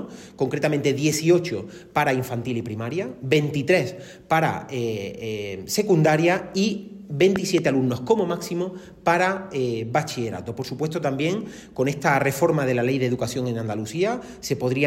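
Between 7.36 and 7.60 s, a loud pop arrives as two sharp thumps in quick succession, peaking roughly 15 dB above the sound, which carries on underneath. This is likely a voltage pulse from a switch, plug or static. Unlike a dropout, nothing goes missing.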